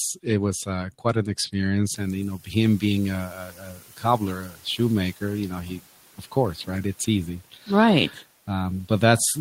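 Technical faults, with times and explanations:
0.66–8.23 s, speech cut by the noise suppressor: parts of the speech at 0.66–1.55, 2.37–2.83, 3.27–4.79, 5.63–5.81, 6.18–6.68, 7.52–7.68 and 8.1–8.23 s are pulled down with the background. They drop by about 12 dB early on and about 8 to 9 dB later, so soft consonants and endings sound swallowed. Only part of each span is hit, and around 3.3–4.8 s roughly a second fades. Unlike the catching-up effect, here the speech itself dips.
1.88–3.78 s, noise suppressor catching up: the room noise jumps by roughly 20 dB at about 2 s and ends up sitting roughly 24 dB under the speech. The suppressor's noise estimate trails this jump, so the new noise first comes through with less reduction and then sinks over about 1.9 s as the estimate adapts, ending about 7 dB lower. This is a swell and settle of the background rather than missing pieces of speech, which tells it apart from the speech cuts.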